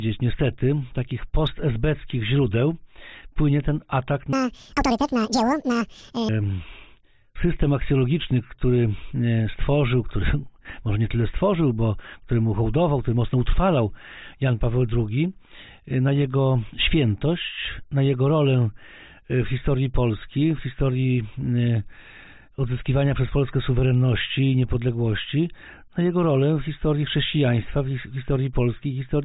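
From 4.33 to 6.29 s, the audio is played back at twice the rate it was captured at, with no rate conversion, which points to 8 kHz material run at 16 kHz. This wrong sample rate makes the sound play at double speed and an octave higher, a 12-semitone rise, so it comes out shrill and rushed.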